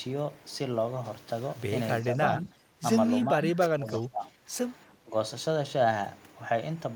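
From 2.02 to 2.83 s the speech dips by roughly 10 dB, then from 3.33 to 4.36 s it drops much harder, around 25 dB at its deepest, and a brief cut of about 20 dB follows at 5.01 to 5.14 s. This is speech suppressed in double talk, likely from an echo canceller that mistook the talker for far-end echo. On a waveform the envelope pinches in.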